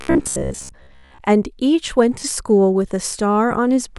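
From 0.02 to 1.18 s, new audio likely arrived too seldom, so the software kept replaying a roughly 15 ms slice for most of that stretch. This is robotic sound from repeated short buffers: a rigid, metallic 66.7 Hz buzz loosely tracking the speech.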